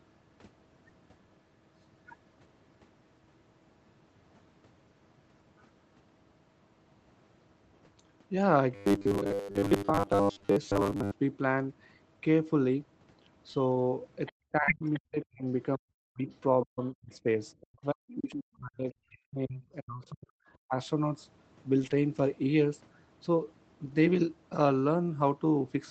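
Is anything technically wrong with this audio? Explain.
Yes, several problems are audible in this speech.

From 8.75 to 11.12 s the voice turns into a rigid, metallic buzz at about 100 Hz that only loosely tracks the speech. This is robotic sound from repeated short buffers, and the likely cause is audio arriving too seldom. The playback side kept repeating the last 10 ms of sound, which sets the 100 Hz pitch, and this replaced most of the real audio in that stretch.

At 11.69, 13.71 to 13.81, 14.68, 21.78 to 21.96 and 23.84 to 23.94 s the sound briefly grows rougher and noisier, but there is no dropout. These are lost packets rebuilt from error correction. Opus packets went missing, in runs worth 20 to 100 ms, and the decoder played the low-bitrate copies that the following packets carried. That keeps the audio continuous but coarser.

Faint scraps of a second voice appear at 14.26 to 14.32, 14.85 to 14.99, 16.33 to 17.16 and 18.10 to 18.32 s, about 20 to 25 dB below the main talker. 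This is the other side's voice leaking through. The likely cause is the far end playing over a loudspeaker, with the echo canceller failing to remove all of it from the microphone.

Between 14.52 and 20.73 s the main voice keeps dipping and dropping out in pieces, by as much as about 40 dB, for roughly four seconds in total. This is speech suppressed in double talk. Both sides were likely talking at once, and the echo canceller turned the near talker down along with the echo it was fighting.

From 14.63 to 14.70 s there is a brief smear where about 40 ms of audio never arrived. This is short concealed packet loss: the receiver extended the preceding sound to cover the gap and then blended back into the real audio. The last part of this moment coincides with the error-correction rebuild at 14.68 s.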